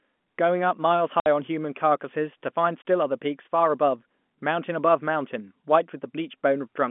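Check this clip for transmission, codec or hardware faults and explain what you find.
Two dropouts break up the speech, both from packet loss filled with silence. At 1.20 s the sound cuts to dead silence for 60 ms, and at 2.82 s a shorter 30 ms hole appears. Each gap starts and ends abruptly. Lost packets were replaced with silence rather than concealed, and the gap lengths fit a 30 ms packet size: two packets in the first gap, one in the second. The narrow telephone band of the G.711 line carries across both gaps.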